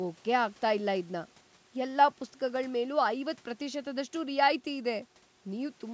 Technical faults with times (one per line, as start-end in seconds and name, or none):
none